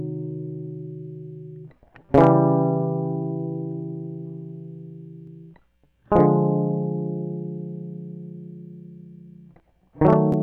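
Hard clipping hits the music at 2.14–2.29 s, overdriven by about 5 dB, then more lightly, about 2 dB, at 6.17–6.20 s and 10.07–10.14 s. Peaks exceed the stage's ceiling and are sliced flat, giving brief crackle on the loudest moments, sharper and more abrupt than soft saturation's rounded, warm distortion.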